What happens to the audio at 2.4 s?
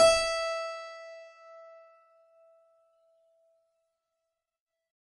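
At 2.4 s the music carries the same damage heard across the whole clip, most likely from heavy MP3 compression at a bitrate as low as about 32 kbps. Short of bits, the encoder has cut everything above 11.2 kHz and drops weak frequency lines that flicker on and off from frame to frame. That flicker gives a watery, swirling texture with smeared attacks, which a plain low-pass filter's dull but steady top end would not have.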